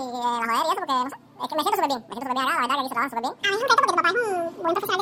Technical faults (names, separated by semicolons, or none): audio read two samples at a time (double speed)